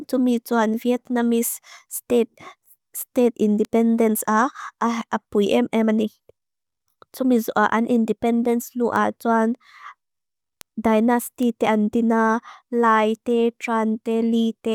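Bit error spikes land at 3.65, 8.96, 10.61 and 11.43 s. Flipped bits in a few samples cause single sharp ticks, peaking at about -17 dBFS for the first and about -10 dBFS for the rest.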